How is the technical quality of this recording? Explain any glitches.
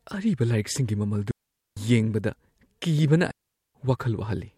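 The recording has two clear glitches, both digital wireless dropouts. At 1.31 to 1.77 s and again at 3.31 to 3.75 s the speech cuts to near silence for about 0.46 s and 0.44 s. The receiver lost too much data and muted with a very fast fade, leaving clean holes with no noise burst on either side. A waveform shows flat gaps, and a spectrogram shows empty vertical bands.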